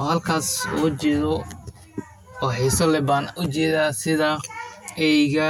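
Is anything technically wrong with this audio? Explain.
Yes. Channel delay causes comb filtering throughout. One channel lags about 10 ms before mono summing, notching from about 50 Hz upward. The speech sounds hollow.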